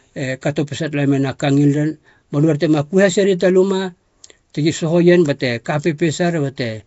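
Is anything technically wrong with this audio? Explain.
Yes. Throughout, the speech was likely passed through Nellymoser compression, fitting about 32 kbps. Weak bands are filled with noise, giving a hissy, smeared, underwater sound with nothing above 7.7 kHz.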